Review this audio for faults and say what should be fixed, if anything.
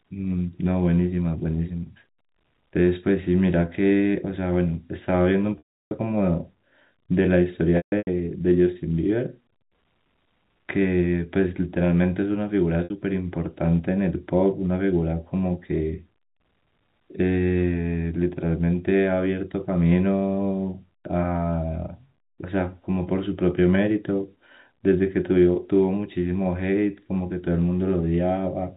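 Packet loss with pitch repetition: the network dropped packets at 5.58–5.91 s (330 ms), 7.77–8.07 s (240 ms scattered, longest run 150 ms) and 12.84–12.90 s (60 ms). The receiver replays the last pitch period to fill each gap, so the 60 ms loss sounds like a briefly held buzz. The longer losses fade to silence before the speech cross-fades back.

Adding forward error correction or redundant packets on the network path would keep these losses from reaching the listener.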